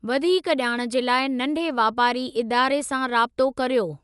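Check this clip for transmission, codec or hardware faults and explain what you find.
One codec fault affects the whole speech clip. Throughout, likely Dolby Digital compression: nothing sounds above 11.4 kHz, and starved lines are filled with dither, giving dull, fluttering roughness rather than MP3-style swirling gaps.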